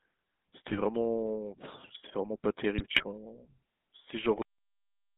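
Throughout, the speech carries the GSM full-rate codec's character: a buzzy, gravelly roughness from the pulse-driven vocal tract model, which fits the 13 kbps full-rate mode. The band is limited to roughly 200 Hz to 3.6 kHz, and the codec damage is plainly audible.

GSM bit errors appear twice. From 0.70 to 0.77 s, a brief squawk sounds like corrupted filter or gain values distorting a frame or two. From 2.77 to 3.08 s, a longer run of gargling and pops suggests many consecutive decoded frames with bent spectra and level bursts.

At 4.42 s the audio has a cut-off end. It stops mid-sound and drops straight to digital silence with no decay, as if the final buffers were never written or played.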